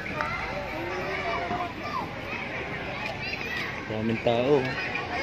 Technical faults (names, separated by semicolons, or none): none